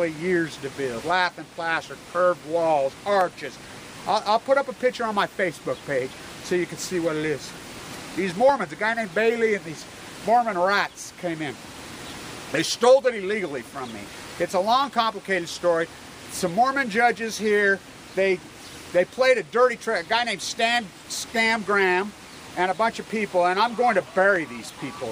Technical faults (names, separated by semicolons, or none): clock drift buffer slips